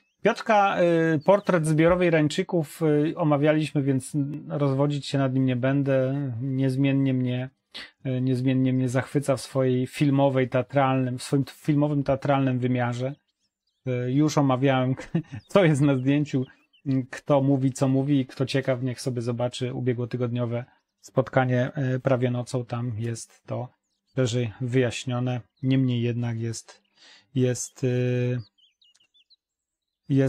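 At 4.34 s there's a block of digital silence, a gap of about 1.45 ms where the sound drops out abruptly, which fits a 64-sample buffer not getting filled in time. With no fade either side, it comes across as one quick tick.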